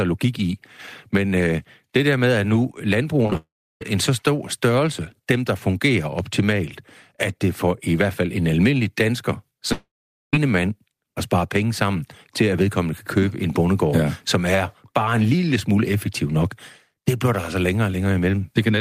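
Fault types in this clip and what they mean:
Repeated packet loss (robotic sound): from 3.23 to 3.35 s the speech turns choppy, with four short holes, the longest about 19 ms, together hiding around 40 percent of that stretch. Packets went missing or arrived late one after another, and each gap was patched by stretching the sound just before it, so small pieces of speech drop out and the repeated patching gives the brief robotic edge.
Long network dropout: twice the speech stops and is replaced by a fading buzz-like continuation and then silence, first from 3.37 to 3.82 s, just before "en så stor størrelse", then from 9.73 to 10.34 s, between "fald en almindelig dansker" and "mand at spare penge". These match audio likely failing to arrive over the network for about 440 and 600 ms. The receiver carried the last sound forward briefly, then went quiet for about 340 and 460 ms, and the lost speech never returns.
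Loud pop: a single sharp pop lands at about 6.19 s, right after "størrelse dem der fungerer", standing roughly 5 dB above the speech, which carries on underneath it. This is the kind of click a sudden electrical step or pulse produces, likely from a connector, switch, static discharge or a driver glitch, briefly shaped by the circuitry that follows into a short, hard transient.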